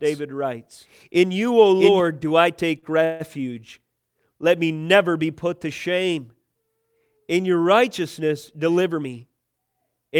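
From the very start of the clip until 2.0 s, the speech is heard twice: a second, equally loud copy trails the first by roughly 0.7 s, dry and full-band, and it cuts off abruptly at 2.0 s. This doubled audio track is likely a second capture through a slower path.

At 2.79 s a sound is held too long, for 38 ms until 2.85 s, with a faint buzz or dip. This is a short stall from a late packet: the jitter buffer ran dry, the last sound was stretched to cover, and playback resumed where it left off.

From 3.05 to 3.22 s the speech hangs as a fading buzz or hiss for about 154 ms without ever dropping to silence, then carries on with nothing lost. This call audio freeze was likely caused by packets held up in transit, which emptied the jitter buffer and pushed the audio later.

Just after "your righteousness", from 8.51 to 9.89 s, the speech sounds hurried, running at about 111% speed while its pitch stays the same. 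This is a jitter buffer speed-up: to trim excess delay, the receiver cut around 150 ms in many tiny pitch-period slices.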